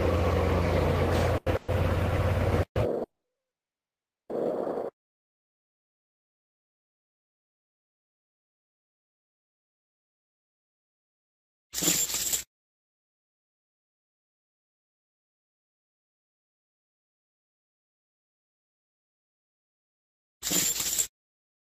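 At 1.37 s a short stall from a late packet holds the sound for about 90 ms until 1.48 s. The jitter buffer ran dry, so the receiver stretched the last sound with a faint buzz and then resumed without losing anything.

A call audio freeze follows from 1.56 to 1.70 s, where the last sound carries on as a 120 ms buzz. A longer one runs from 3.03 to 4.31 s: a brief fading buzz, then about 1.24 s of silence. Both likely come from packets held up in transit, leaving the buffer empty. Playback resumes where it stopped, adding delay rather than dropping audio.

From 10.0 s to 21.69 s a jitter buffer speed-up plays the audio at 112% with unchanged pitch. The receiver trims repeated pitch-period slices, roughly one and a half seconds in total, to shed the built-up delay, so the sound comes across as hurried.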